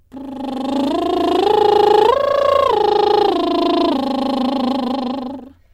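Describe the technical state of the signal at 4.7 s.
At 4.7 s the music still carries periodic clock jitter, present throughout: the converter clock wobbles at around 1 kHz, adding sidebands that give everything a rough, metallic edge.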